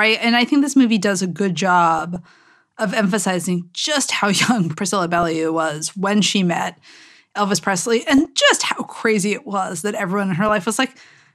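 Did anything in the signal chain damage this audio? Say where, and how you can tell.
Yes. DAB burbling appears twice: 1.99 to 2.26 s, just after "movie does a good", and 8.03 to 8.29 s, just before "just how crazy it". Both bursts lay short blips of noise over the speech. The fault sits in the broadcast reception feeding the MP2 decoder. Weak reception let bit errors of about 0.15 and 0.3 percent slip past error correction, corrupting samples so single sub-bands carried noise. Each burst's length fits roughly a dozen frames.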